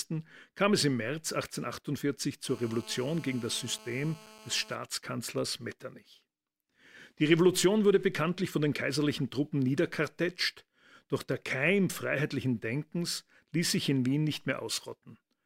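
From 2.49 s to 4.75 s, a GSM phone buzz sits under the speech. A nearby 2G phone on a call sends 217 Hz bursts, and the audio circuit rectifies them. The result is a steady, raspy, harmonic-rich buzz about 22 dB below the speech.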